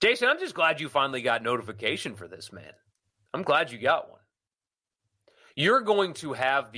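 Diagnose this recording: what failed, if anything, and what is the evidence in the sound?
Nothing failed in this speech recording, and no stage of the chain leaves a mark in the sound. There is no evidence to point to, because no event stands out anywhere in the recording.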